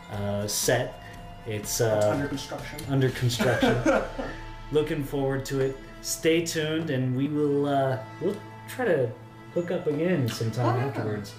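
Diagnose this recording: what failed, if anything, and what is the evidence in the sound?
Audio missing between chunks, at 2.31 s and 7.26 s, about 5 s apart: the sound skips forward with no gap. This is likely a chunked recording buffer dropping roughly 50 ms at each handover. On a spectrogram, the harmonic traces jump abruptly at those instants, and the waveform shows a hard splice.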